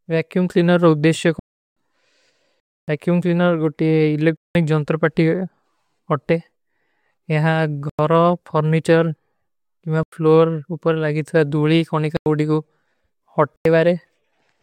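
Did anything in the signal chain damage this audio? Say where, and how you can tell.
Yes, at the driver or buffer stage. There are blocks of digital silence at 1.39, 2.60, 4.37 (right after "ଵ୍ଯାକ୍ଯୂମ କ୍ଲିନର ଗୋଟୀ"), 7.90, 10.03, 12.17 and 13.56 s. The first three last 0.37, 0.28 and 0.19 s, and the rest about 93 ms each. The lengths fit multiples of a 4096-sample buffer, which points to the output not being refilled in time.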